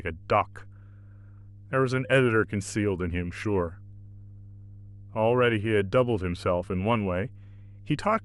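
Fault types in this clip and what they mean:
Mains hum: a steady 50 Hz tone with low harmonics runs under the speech for the whole clip, at roughly 20 dB below it, from power-line coupling such as a ground loop. Unlike broadband rumble, it holds a fixed, clearly pitched frequency.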